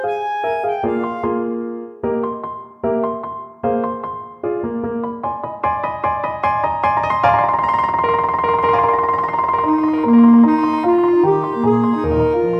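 At 8.63 s a doubled audio track begins and runs to the end: a second, full-band copy of the sound trails the original by about one and a half seconds, roughly 10 dB quieter, switching on abruptly with no fade, decay or room colour. This is likely a second capture through a slower path, or an edit holding two copies out of step. On a spectrogram, every event reappears as a fainter identical pattern shifted later in time, and the waveform shows matching envelope shapes offset by the same fixed gap.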